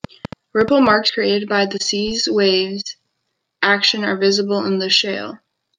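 Interference from nearby equipment or a faulty connection is likely injecting pulses from 0.04 to 0.91 s. This train of clicks runs at about seven per second, unevenly spaced, roughly seven similar pops standing around 10 dB above the speech, audible over it and in gaps.

At 1.09 to 1.19 s, compressed frames were skipped, either missing from the file or rejected by the decoder as damaged. The speech jumps ahead by about a tenth of a second.

From 2.07 to 2.12 s, a corrupt FLAC frame was decoded without its checksum being checked. Flipped bits sent the predictor off course within that single frame, giving an error peaking at about -28 dBFS. The next frame is clean.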